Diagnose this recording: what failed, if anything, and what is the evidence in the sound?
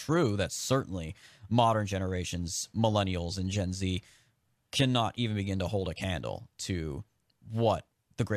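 Nothing failed in this speech recording. No stage of the chain, from the analogue side through to playback, leaves an audible trace of a failure.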